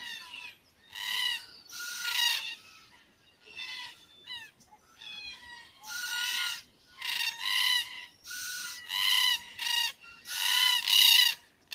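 A noise suppressor applied to these sounds, tuned for speech, pumps the level throughout, swinging around 10 dB as steady parts and tails are treated as noise. Sound is cut by the noise suppressor at 0.52–0.94, 2.57–3.51, 3.93–5.01, 5.64–5.83, 6.63–6.98, 8.08–8.25, 9.93–10.27 and 11.37–11.72 s, sinking by about 7 to 11 dB and clipping decays short.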